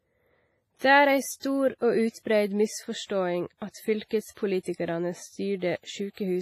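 Throughout the speech, the sound is ringing and washy, with a hiss that swells and fades along with the signal, and nothing is present above 15.3 kHz. The likely cause is heavy WMA compression, with damage consistent with WMA 1 at a low bitrate near 24 kbps. Its long transform blocks smear quantisation noise over tens of milliseconds around each syllable, and at this rate weaker spectral lines are zeroed, leaving a hollow, watery texture.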